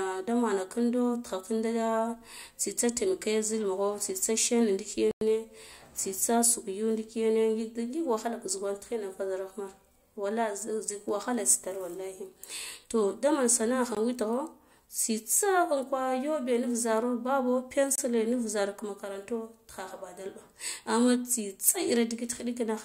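At 5.11–5.21 s, 13.95 s and 17.96–17.98 s the speech drops to silence, likely a Bluetooth stall as the headphone buffer ran dry, then resumes; the waveform and spectrogram show blank vertical gaps.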